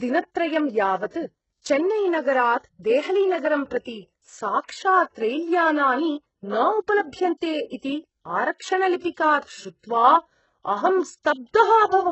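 From start to finish the speech carries heavy codec damage, with nothing above 8 kHz. The treble that remains sounds synthetic rather than simply dull: s sounds turn gritty and lispy, with a metallic edge. That points to HE-AAC compression as the likely cause, at a bitrate that fits roughly 8 kbps. The upper band is rebuilt from copied lower bands, so its harmonics misalign. A plain low-pass would muffle the treble instead of roughening it.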